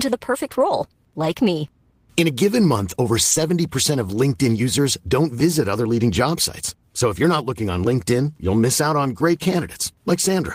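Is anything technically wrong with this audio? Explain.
Yes. The speech has several stretches of lost packets rebuilt from error correction, at 0.41–0.71 s, 1.21–1.27 s, 3.31–3.37 s, 4.55–4.57 s and 6.13–6.15 s. The first spans roughly 160 ms of rebuilt sound, which fits eight separate 20 ms packets. The others fit one or two. Each lost packet's content came from a low-bitrate backup copy carried in the following packet, so the speech continues without a break but turns briefly rough and grainy. Unlike plain loss concealment, there's no silence, buzzy repetition or fading tail, only a momentary drop in quality.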